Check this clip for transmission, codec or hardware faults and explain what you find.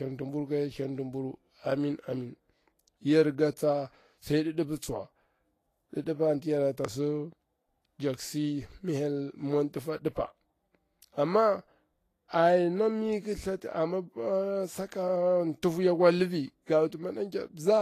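There's one problem, and it runs the whole length of the speech: a hissy, grainy top end, with consonant attacks smeared and tones sounding roughened. That's most likely Vorbis compression at a low setting, with the damage plainly audible, which fits a bitrate somewhere around 34 kbps. At that rate the encoder keeps the broad spectral shape but quantises the treble residue so coarsely that real detail turns into noise of similar energy, hence the sandy, fizzy texture.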